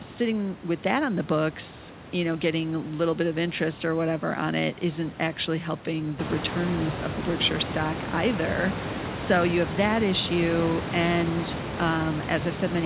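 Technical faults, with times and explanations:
No technical faults, with times and explanations, to report.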